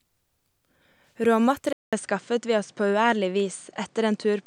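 At 1.73 s the recording most likely switched to a poorer input device, and everything from there to the end comes through that different microphone path. The change opens with a 200 ms gap of silence. Afterwards the speech loses everything above 9.3 kHz, so it sounds duller and less airy, and a faint new background noise appears well beneath the voice. The overall level stays roughly where it was.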